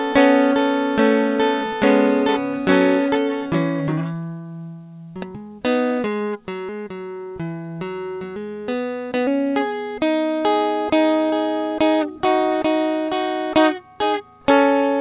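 At 3.88 s the music lurches forward with no pause at all: roughly 0.7 s of the passage simply never plays, and the material on either side of the gap butts straight together. This is a skip ahead. A chunk of audio was discarded in transit or by the overfull jitter buffer while later audio was already queued, so playback resumed from the newer audio without filling the hole. Because nothing was inserted, the seam sounds like an abrupt edit rather than a dropout.

From 5.91 to 6.36 s the music briefly rushes, running about 9% fast while keeping its pitch, so the tempo audibly tightens and then settles back. This is a jitter buffer speed-up. With more audio stored than the buffer's target, the receiver trimmed tiny pitch-period-length slivers in quick succession, removing around 50 ms in total to bring the delay down. Throughout, the band-limited sound with nothing above 4 kHz reflects the narrowband G.711 A-law call codec.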